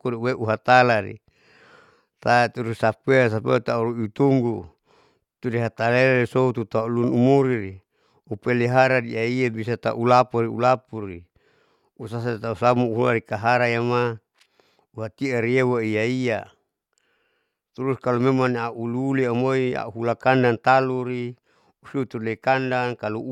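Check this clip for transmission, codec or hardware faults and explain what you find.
No transmission, codec or hardware faults can be heard in this speech recording; the signal runs without dropouts, clipping, distortion or other technical disturbance.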